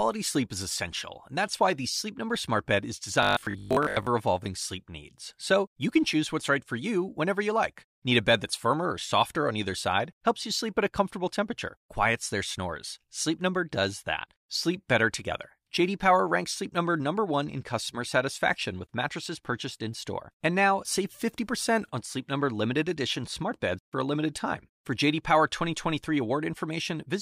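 From 3.23 to 4.07 s, just before "evolving sleep needs", the speech turns into a rigid metallic buzz at 50 Hz: robotic sound from repeated short buffers, likely from late-arriving audio. Roughly 70% of the passage is a looped 20 ms slice, so unlike a dropout, the sound keeps loosely tracking the words instead of going silent.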